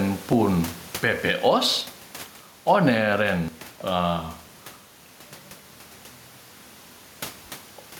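Gain pumping runs through the whole speech clip. The room noise sits about 28 dB below the speech, and the gain swings by roughly 5 dB. The likely cause is excessive gain, with a fast limiter clamping peaks and squashing dynamics.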